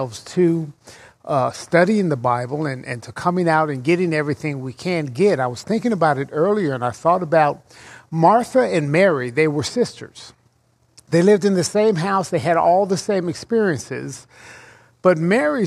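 Nothing here calls for comment, since no technical faults turn up anywhere in the audio.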